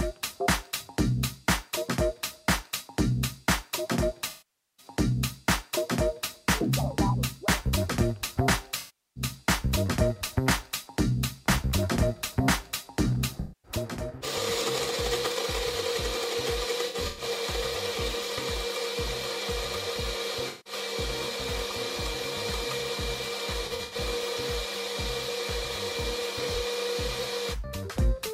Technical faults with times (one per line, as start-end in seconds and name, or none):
4.29-4.86 AAC frame loss with concealment
8.77-9.23 AAC frame loss with concealment
13.40-13.72 AAC frame loss with concealment
16.88-17.23 AAC frame loss with concealment
20.48-20.73 AAC frame loss with concealment
23.62-23.96 AAC frame loss with concealment
26.41-26.60 AAC frame loss with concealment